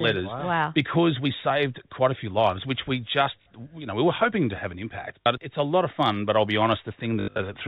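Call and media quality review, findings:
Packet loss with last packet repeated: brief robotic stutters at 3.42 s (after "few lives which we") and 5.23 s (after "to have an impact"), plus scattered buzz 7.2–7.4 s. Receiver replaying stale frames; 50 Hz buzz fits 20 ms packets.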